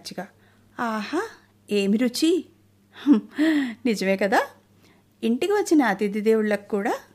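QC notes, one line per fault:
No faults detected.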